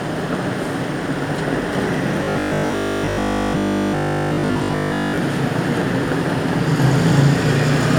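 A recording of everyday sounds with robotic sound from repeated short buffers between 2.24 and 5.18 s. Across that stretch the audio turns into a rigid, metallic buzz pitched at 50 Hz, with essentially all of it replaced by repetition rather than fresh material. A 50 Hz fixed pitch fits a segment of about 20 ms being replayed over and over, likely because new audio was arriving too slowly and the last buffer was looped to fill the gap.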